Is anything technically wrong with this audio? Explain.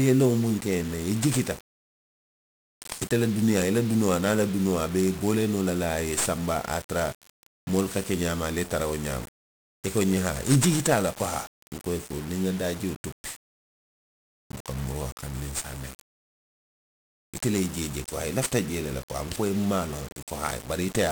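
Yes. Throughout the speech, 1-bit DFPWM compression codes each sample as a single up-or-down step on an adaptive level, at a rate that suggests about 48 kbps. The heavy, broadband quantisation noise makes the voice fuzzy and crackly, with treble buried under hiss.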